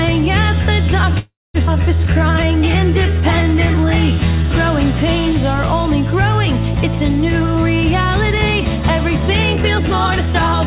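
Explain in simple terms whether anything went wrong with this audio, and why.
Several things go wrong, all typical of a call link.

At 1.19 s there is a call audio freeze. The sound stalls for about 0.38 s, continuing briefly as a fading buzz, then going silent for about 0.23 s. Delayed network packets are the likely cause. Nothing is lost; the audio resumes where it stopped.

Right after, at 1.66 s, comes a skip ahead. Playback jumps forward. Roughly a third of a second of audio is gone, and the two sides are joined almost directly. This cancels the delay the freeze had built up.

From 2.14 s to 4.44 s there is a jitter buffer slow-down. The receiver repeats tiny slices of sound to rebuild its reserve. The audio plays at about 90% speed, stretching by about a quarter second, but the pitch stays the same.

Later comes a jitter buffer speed-up, from 8.37 s to 9.60 s. Tiny slices are cut out to reduce the delay. 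The audio runs about 15% fast and sounds hurried, losing roughly 0.2 s. A milder one, about 6% fast, runs from 10.15 s to the end.

The whole clip also has the muffled call-line sound of its codec, with nothing above 4 kHz.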